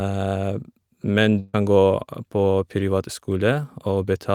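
Speech clip with a burst of packet loss from 1.39 to 1.55 s. For 139 ms the receiver extends the last sound and attenuates it, producing a decaying buzz or hiss, then playback resumes with roughly 140 ms of the original audio missing.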